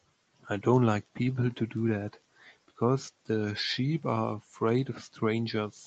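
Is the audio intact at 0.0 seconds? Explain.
Yes, the speech is intact at 0.0 seconds, with nothing heard there beyond the ordinary band limit of a call path that carries nothing above about 8 kHz.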